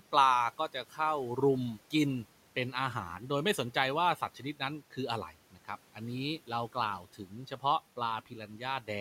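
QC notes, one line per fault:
0.58–0.99, 4.17–4.42, 7.03–7.32 and 8.26–8.61 s, speech cut by the noise suppressor: soft speech ducked about 7–11 dB with the room noise, sounding swallowed, not silenced like a dropout.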